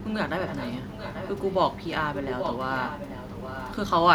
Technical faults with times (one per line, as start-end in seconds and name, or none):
0.45-1.56 echo leak
2.15-3.75 echo leak